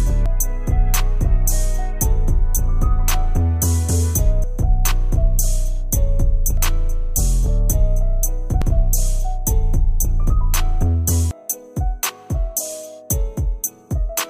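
At 0.26, 6.57, 8.62 and 11.31 s, damaged data in a compressed stream makes the decoder lose frame sync, heard as a chirp, squawk, click or short hole.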